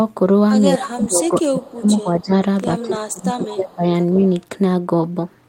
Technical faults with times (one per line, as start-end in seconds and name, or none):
0.77-0.82 echo leak
0.82-2.32 speech suppressed in double talk
1.24-1.28 echo leak
2.82-3.84 speech suppressed in double talk
3.44-3.54 echo leak
4.14-4.32 echo leak